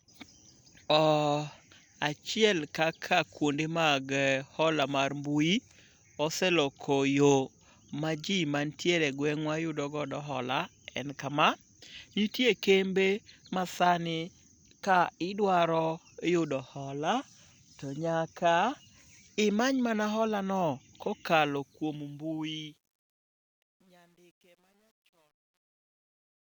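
Speech, with a fade-out running from about 21.4 s to the end at 26.5 s that suffers truncation distortion from 21.36 s onward. The fade stage is keeping too few bits and adds no dither, which fits a path near 10-bit resolution. As the level falls toward the smallest step, the waveform collapses into coarse square steps. From 22.55 s to 26.5 s the tail is at its worst, turning gritty instead of tapering cleanly.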